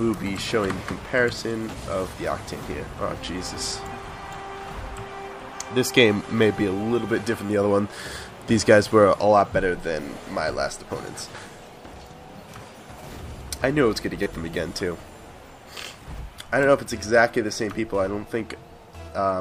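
At 4.39 s, 7.46–7.49 s and 14.23–14.26 s a repeated buffer occurs: playback ran dry and replayed the last block, once at 4.39 s, three times in the later two. Each repeat gives a brief buzzing stutter, which fits a 10 ms buffer. Unlike a dropout, there is no gap of silence.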